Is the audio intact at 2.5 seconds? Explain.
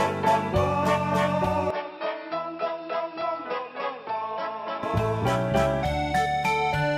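No. From 1.70 to 4.83 s the input likely switched to a poorer device, cutting everything above 5.5 kHz, so the sound turns dull, slightly quieter, with fresh background noise.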